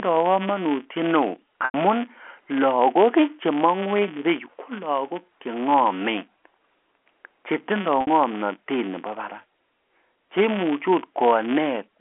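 Right from the start there's a filter restarted on every block: it drops its state and begins each block from silence, so a little transient lands every time. You hear it as a steady buzz near 188 Hz that rises and falls with the speech, which fits a 256-sample block.

Then there's packet loss with pitch repetition, at 1.65 to 1.74 s and again at 8.01 to 8.07 s. About 90 ms goes missing the first time, which points to three packets, and 60 ms the second, likely two. The receiver loops the last pitch period over the gap, so each one sounds like a held, buzzy note fading into silence before the speech returns with a short cross-fade, all within the narrow telephone band.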